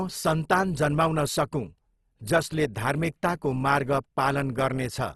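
Throughout, the speech turns rough and grainy, with nothing above 12.2 kHz, likely Opus compression in CELT mode noise-filling starved bands at a bitrate near 16 kbps.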